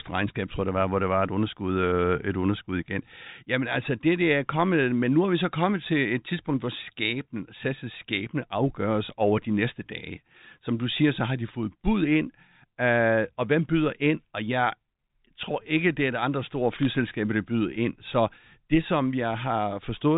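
Bit errors on a digital phone line crackle briefly in this speech clip from 16.83 to 16.85 s, where flipped bits corrupt single G.711 mu-law samples into sharp ticks within otherwise unaltered narrowband telephone audio.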